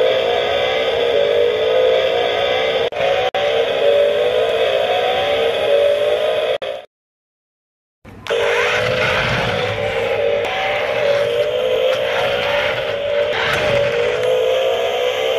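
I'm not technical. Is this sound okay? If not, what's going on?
No. At 3.29 s and again at 6.57 s, the sound briefly stops for about 55 milliseconds and then picks up exactly where it left off. This is a gap at a join of encoded pieces: the audio was compressed in separate parts and stuck together, leaving each part's built-in silent padding in place.

From 6.75 s to 14.75 s there's a small tick once every second, around ten in all, each a tiny half-millisecond blink of silence. These are periodic USB or driver dropouts: something on the computer briefly interrupted the audio connection at a steady rhythm.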